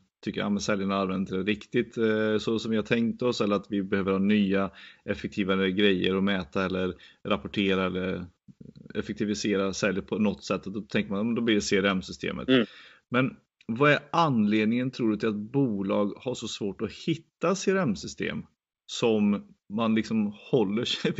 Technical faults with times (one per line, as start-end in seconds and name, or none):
none